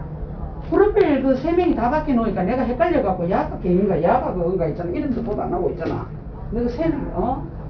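From start to finish the sound carries aliasing. It was resampled to a lower rate without an anti-alias filter, so content that lay above the new limit folded back as false tones. Treble has a gritty, metallic edge, with faint foreign pitches sitting well below the real sound. On a spectrogram, energy runs hard up to a sharp ceiling at 5.5 kHz, which fits an 11 kHz rate, with mirrored streaks moving opposite to the true partials.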